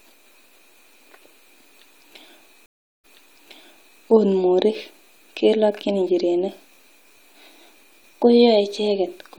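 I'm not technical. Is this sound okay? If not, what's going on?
No. At 2.66 s there's a stream reconnect: the connection dropped, leaving about 0.38 s of silence, then the player hooked back in and picked up 0.98 s earlier, so you hear that bit of speech again. The glitch wraps up by 4.01 s.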